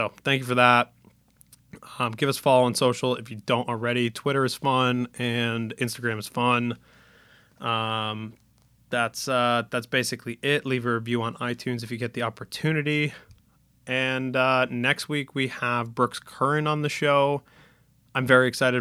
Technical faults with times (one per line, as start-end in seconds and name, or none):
none